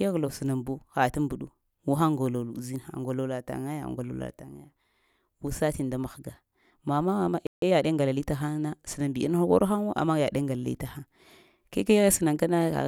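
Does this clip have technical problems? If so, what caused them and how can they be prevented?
Yes, there are two. At 7.47 s the speech cuts out for about 150 ms, a playback stall, most likely the player running dry or its thread getting blocked, then picks up at 7.62 s. A bigger playback buffer or a higher-priority audio thread should stop it.

Right after, from 7.62 to 8.22 s, you get time-compressed catch-up: the player trims its backlog by snipping and cross-fading tiny pieces, so the speech runs about 1.25 times faster at normal pitch. Preventing the stall removes the need for it, or a gentler catch-up rate would hide it better.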